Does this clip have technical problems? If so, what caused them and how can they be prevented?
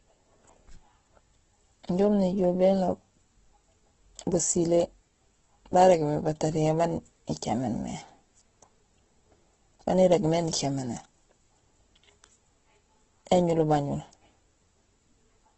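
Yes. Opus compression affects the whole recording. Nothing reaches above 8.1 kHz. The speech sounds grainy, rough and noisy, with heavy damage. The encoder likely ran out of bits and filled bands with noise, which fits a rate near 12 kbps. Encoding at a higher bitrate would prevent it.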